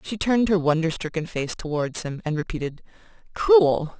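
Aliasing runs through the whole speech clip. The audio appears to have been resampled from 24 kHz to 16 kHz without an anti-alias filter, so content above 8 kHz folds back below it, roughly 20 dB down, making sibilants gritty and metallic.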